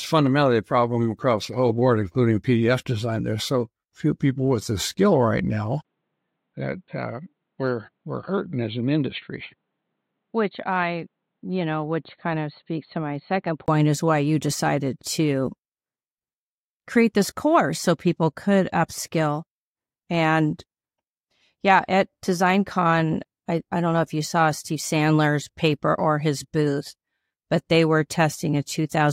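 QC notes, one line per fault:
5.83–13.68 s, likely input switched to a poorer device: 20 ms gap after "the skill right now", then dull band-limited sound, nothing above 4.4 kHz, about 5 dB quieter.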